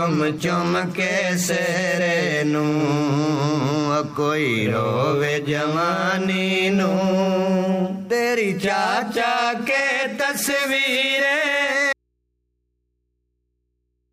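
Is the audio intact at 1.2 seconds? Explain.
Yes, at 1.2 seconds the audio plays through cleanly with no dropout, click or other disruption.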